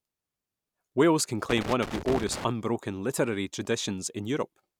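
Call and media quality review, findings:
Loose connector crackle, 1.49 s to 2.44 s, roughly 0.95 s of irregular scratching over the speech. Probable component: worn or dirty jack or cable contact on the analogue side, making and breaking as it shifts. Signal chopped in rapid bursts. Distinct from digital dropout clicks: no even spacing, no clean gaps, rough gritty texture.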